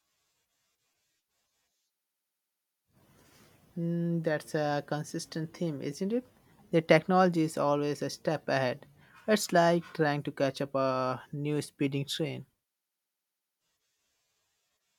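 No technical faults can be heard anywhere in the speech.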